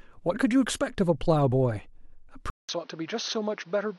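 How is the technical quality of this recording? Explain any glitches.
There's one real problem, at the 2.5 s mark. After about 0.19 s of silence the speech comes back duller and noticeably quieter, with nothing above 6.3 kHz and a new, faint background noise. That pattern points to the input likely being switched to a poorer device.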